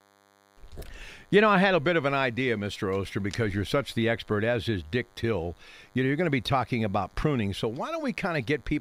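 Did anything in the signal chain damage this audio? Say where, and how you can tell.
Yes. A DECT cordless phone buzz sits under the speech for the whole clip, entering at the analogue stage: a nearby handset's 100 Hz radio bursts get rectified in the wiring or preamp. It sounds thin and steady, roughly 35 dB down, and a spectrogram shows evenly spaced harmonic lines every 100 Hz.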